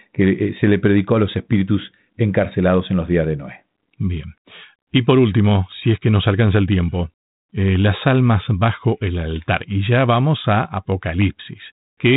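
The clip is speech carried through G.726 ADPCM at 32 kbit/s, with nothing above about 3.9 kHz, and nothing is technically wrong with it.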